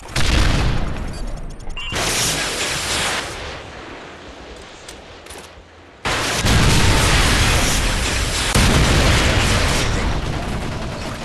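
No dropouts, clicks, clipping or other transport or processing faults turn up anywhere in the recording.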